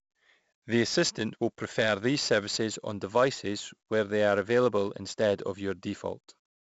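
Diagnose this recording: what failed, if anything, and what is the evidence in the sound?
The codec stage failed: 4-bit ADPCM compression runs through the whole speech clip. A gritty hiss rides every loud syllable, with roughness on sharp onsets where the adaptive step lags. Nothing reaches above 7.7 kHz, which fits a 16 kHz sample rate at 64 kbps. A spectrogram shows level-tracking broadband noise and a hard ceiling.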